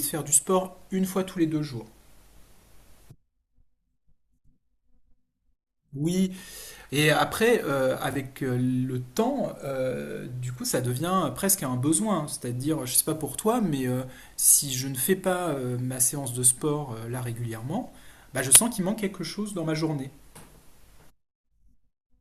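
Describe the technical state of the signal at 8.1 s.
Chunks out of order from 8.11 to 8.15 s: one 21 ms chunk plays a chunk late, swapping adjacent speech segments and leaving three hard joins in a jumbled moment.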